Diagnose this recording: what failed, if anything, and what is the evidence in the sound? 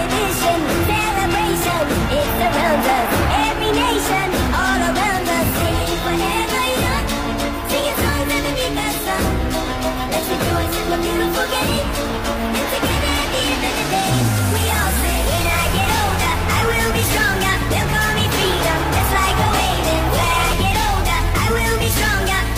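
Periodic USB or driver dropouts every 2.0 s, 1.82 to 21.82 s: millisecond-scale silent gaps heard as regular ticks where a stalled driver or USB bus lost samples.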